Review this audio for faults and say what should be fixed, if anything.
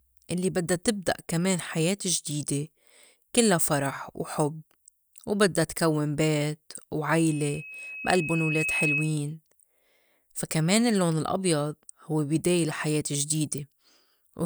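Loudspeaker feedback squeal runs from 7.29 s, just after "وبدّا تكوّن بيت", to 9.19 s. A 2.6 kHz tone swells over about one and a half seconds until it matches the speech level, because the microphone re-amplifies the loudspeaker with loop gain above one there. Unlike a steady interfering whistle, it grows by itself. To prevent it, lower the loudspeaker gain, keep the microphone out of its coverage, or notch 2.6 kHz.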